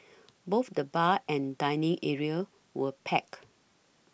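No dropouts, clicks, distortion or other technical faults are audible anywhere in the recording.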